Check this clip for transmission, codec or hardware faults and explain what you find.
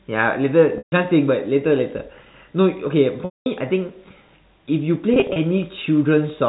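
Three transmission faults are audible, all of the same kind. Packet loss with pitch repetition occurs at 0.78–0.92 s, 3.25–3.46 s and 5.14–5.36 s. Packets went missing, and the receiver bridged each gap by repeating the last pitch period and fading it out over about 50 ms. The first two losses, 140 ms and 210 ms, sound like a held, buzzy tone sinking into silence before the speech cross-fades back in. The third is 110 ms of loss scattered over 220 ms, in runs of at most 30 ms, so it comes across as brief, slightly held, buzzy notes instead of a gap. The G.711 A-law telephone coding at 64 kbps adds little or no damage of its own.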